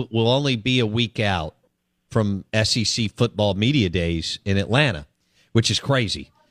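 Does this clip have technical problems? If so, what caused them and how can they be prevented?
No, there are no technical problems in this clip.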